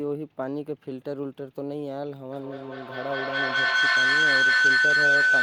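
From 2.31 s to the end there's a feedback howl: two devices in the room share the call, so each loop round gets louder, narrowing to a tone around 1.5 kHz that pulses roughly every fifth of a second and peaks at about 11 dB over the speech.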